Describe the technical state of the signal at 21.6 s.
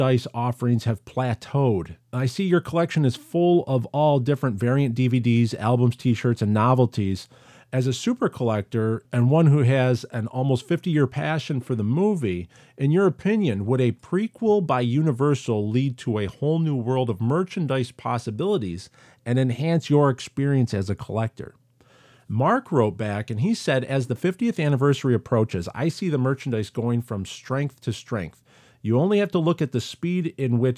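At 21.6 s the speech signal is intact, with no dropout, click, distortion or other fault at that moment.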